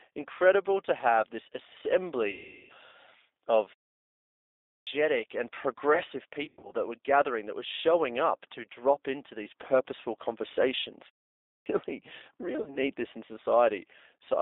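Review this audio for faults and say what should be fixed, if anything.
G.729 codec, throughout the clip: the speech has the slightly rough, synthetic quality of a low-rate codec that rebuilds each 10 ms frame from a vocal tract filter, a pitch predictor and a handful of pulses. The damage is plainly audible. The band is held to roughly 300 Hz to 3.7 kHz, so sibilants and breath above that are gone. This fits G.729A at 8 kbit/s. Prevent it by negotiating a wideband codec such as G.722 or Opus on the call.

VoIP packet loss concealed by the speech codec, at 2.31 to 2.72 s, 6.45 to 6.71 s and 12.62 to 12.78 s: the decoder had no data and extended its last pitch and filter, so the sound smears into a buzzy tone or coloured noise that fades. The first gap covers about 380 ms. The second, between "and progressive" and "that were gathering that", is 160 ms lost in short runs spread over 240 ms. 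The third is a 40 ms blip just before "this in". After each gap the speech sounds weak for a moment while the decoder recovers. Prevent it by fixing the network path or adding a jitter buffer with forward error correction.

Clipped start after a pause, at 4.53 to 4.87 s and 11.33 to 11.66 s: the output device went idle during silence and needed time to resume, so roughly a third of a second of sound after each pause was swallowed. The first follows a 0.87 s pause, and "and progressive" begins abruptly without its opening. The second follows a 0.31 s pause. Prevent it by keeping the output stream open through silence instead of letting the device sleep.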